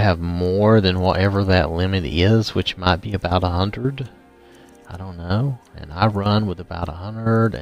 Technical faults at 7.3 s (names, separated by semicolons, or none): none